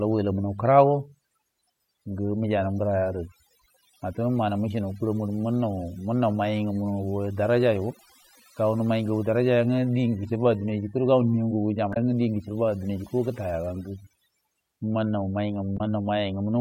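Speech runs throughout with overdone noise removal: the reduction was pushed so hard that bands near the noise estimate were cut away along with quiet parts of the voice. The voice sits over a near-silent floor that twinkles. On a spectrogram the background shows as dark gaps speckled with isolated bright dots. Damaged data in a compressed stream causes two brief glitches, from 11.90 to 11.97 s, just before "guchibua dina", and from 15.77 to 15.81 s. Each time the decoder misread corrupted frames and lost sync until it found the next header, producing a short glitch. A waveform shows an abrupt discontinuity there, and a spectrogram shows a narrow vertical smear.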